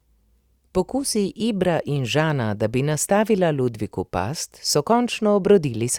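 No technical faults are audible anywhere in this speech.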